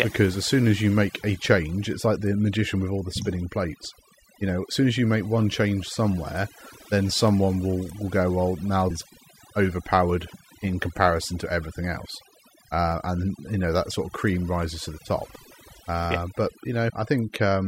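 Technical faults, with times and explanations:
Throughout: overdone noise removal. The noise reducer was set far too aggressively and mutes any frequency band it judges to sit near the noise floor, taking the quieter parts of the speech with it. Between phrases the background drops to near silence with twinkling specks. On a spectrogram, the background is mostly black with scattered isolated dots, and the harmonics look patchy and eaten away at their edges.
7.28 s: dropped samples. Right after "one change somewhere then" and before "will will go well", there is a single sharp click. The cause is likely a tiny gap of a fraction of a millisecond in the sample stream, far too short to lose any audible sound. The waveform steps abruptly from one value to a later one, and a spectrogram shows a thin vertical line running across all frequencies at that instant.
8.89 s and 16.89 s: compressed frames skipped. 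At 8.89 s, just after "will go well now", the audio jumps ahead by about 400 ms. At 16.89 s it jumps by about 100 ms. These come to about 15 and 4 frames of 24 ms, so complete compressed frames went unplayed. The waveform shows a discontinuity in the speech envelope.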